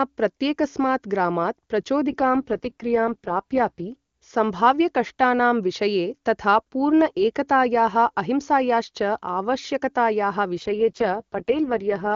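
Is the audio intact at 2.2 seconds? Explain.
No, not quite. At 2.2 seconds the speech is inside an AMR rate drop that runs from about 2.08 to 3.91 s, starting right after "प्रत्येकस्मात् ग्रामात्" and clearing up around "सम्भाव्यकष्टानां विषये तथा पूर्ण". The wideband codec steps down from 23.85 to 6.6 kbit/s, most likely because the link got weak and bits went to error protection. The bandwidth stays put and nothing drops out, but the voice goes rough and raspy, a bit synthetic, until the rate recovers.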